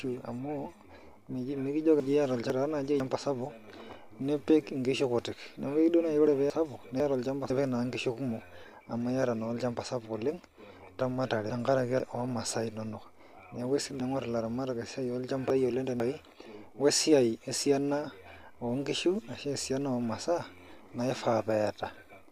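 Chunks out of order at 2.0–3.0, 6.5–7.5 and 11.0–12.0 s: half-second pieces swap places. At 14.0–16.0 s one chunk lands three late. Each sounds jumbled.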